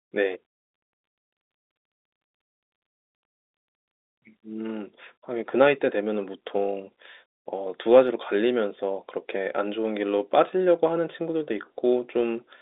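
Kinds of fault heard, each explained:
No kinds of fault are heard in this speech, which comes through the ordinary telephone band as expected.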